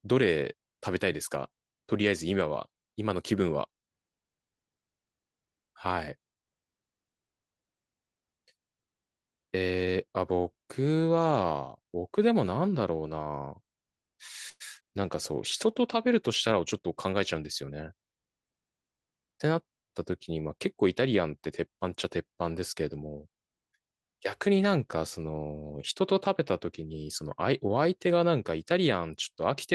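At 14.49 s the speech briefly stalls in a call audio freeze. The last sound is stretched into a fading buzz that drops to silence for about 30 ms, about 108 ms filled in all, before the speech resumes at 14.62 s. Nothing is lost; the packets were likely held up in transit, leaving the jitter buffer empty, so the gap simply pushes everything later.

Just after, from 16.52 to 17.71 s, you get a jitter buffer speed-up. The speech runs at about 109% speed with unchanged pitch and sounds a bit hurried as the receiver clips out tiny pitch-period slices, around a tenth of a second in total, to shed the extra delay.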